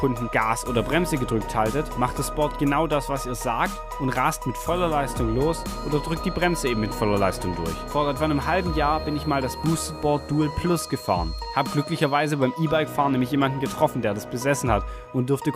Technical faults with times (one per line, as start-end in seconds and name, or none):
5.23-12.43 feedback whistle